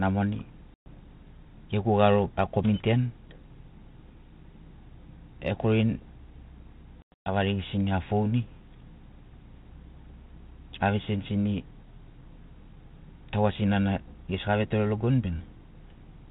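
At 0.74 to 0.88 s the speech drops into a hard-edged silence of about 120 ms, and it returns slightly distorted. At 7.02 to 7.29 s several shorter gaps, the longest 120 ms, chop about 220 ms from a 240 ms stretch. This is packet loss on an ADPCM call, here narrowband G.726 at 32 kbit/s. Lost packets, roughly seven and then about ten, became silence. The decoder's adaptive predictor and step size drifted from the sender's, causing the distorted re-entry until they resynchronise.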